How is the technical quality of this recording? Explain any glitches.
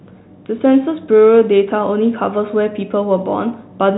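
No glitches heard here.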